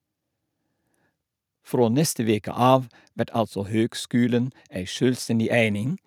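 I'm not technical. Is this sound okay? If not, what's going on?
Yes, nothing in this recording stood out as a problem when I listened to it.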